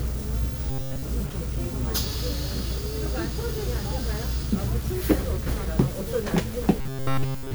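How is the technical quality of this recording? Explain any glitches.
The technical quality is poor, with coarse quantisation distortion running through the whole recording and two stretches of robotic buzzing.

Throughout, the audio has a grainy, gritty distortion whose texture shifts with the sound itself, sitting only about 20 dB below the signal. This is low bit depth without dither, likely from the signal being rounded to around 6 bits. With so few levels and no dither to decorrelate the error, the rounding error tracks the waveform, so quiet passages turn rough and the faintest detail breaks up between adjacent steps.

From 0.70 to 1.05 s, and again from 6.81 s to the end, the sound becomes a rigid, metallic buzz pitched at 134 Hz. This is robotic sound from repeated short buffers, likely caused by audio arriving too slowly and the playback filling the gaps by looping the last short block, which fits a block of roughly 7.5 ms. 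In the first stretch most of the material is repeated; in the final stretch all of it is, so the original sound is almost entirely replaced by the fixed buzz.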